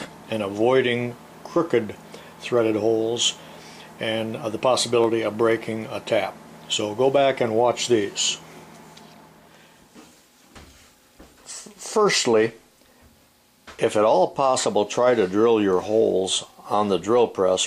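Two sharp, isolated clicks occur in the audio, at 5.04 s and 7.48 s, each most likely from dropped samples, with a fraction of a millisecond missing so the waveform steps abruptly to a later value. A spectrogram shows each as a thin vertical line spanning the spectrum.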